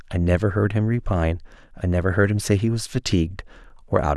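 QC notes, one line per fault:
No technical faults can be heard in the speech signal, which holds steady in continuity across the whole recording.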